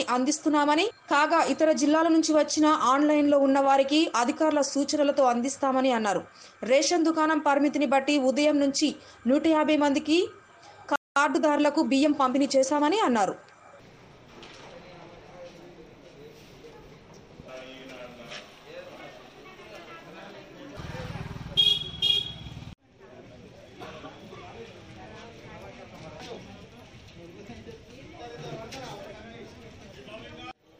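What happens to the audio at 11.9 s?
At 11.9 s the audio is in a time-compressed catch-up, which runs from 11.16 s to 13.20 s. After a stall, the player is working through its backlog by dropping small slices of the signal and cross-fading across the gaps. That plays the material about 1.1 times faster than normal. The sound comes across as hurried but stays at its normal pitch over those two seconds.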